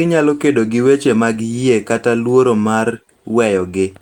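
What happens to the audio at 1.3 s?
Nothing goes wrong at 1.3 s: the speech continues intact through that moment, with no dropout, click or distortion.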